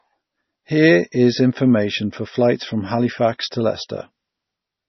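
From start to end, the speech has no content above about 5.9 kHz, and the band below carries the smeared, swirly texture of heavy perceptual coding. The file itself is large, so the damage came earlier: this is likely low-bitrate audio saved at a high bitrate. The cut-off and artefacts fit an MP3 pass at roughly 24 kbit/s, later re-encoded near 194 kbit/s, which preserved the losses without restoring anything.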